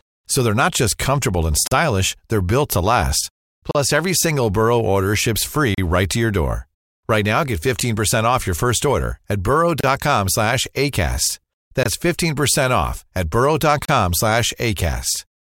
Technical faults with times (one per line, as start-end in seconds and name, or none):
1.67-1.71 gap between stream segments
3.71-3.75 gap between stream segments
5.75-5.78 gap between stream segments
7.80 gap between stream segments
9.80-9.84 gap between stream segments
11.83-11.86 gap between stream segments
13.85-13.89 gap between stream segments